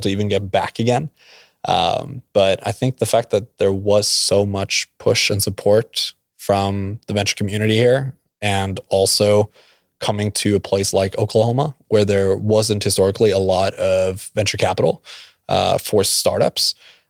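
Listening to the speech recording, nothing stood out as a technical fault at any point.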